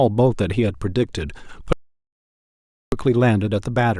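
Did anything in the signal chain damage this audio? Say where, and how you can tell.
Yes. An audio dropout to silence runs from 1.73 to 2.92 s, cutting the speech off mid-flow and losing about 1.19 s. The gap is dead silence with no room tone, unlike a natural pause or noise gate, which points to a likely lost input link while the recorder kept writing silence.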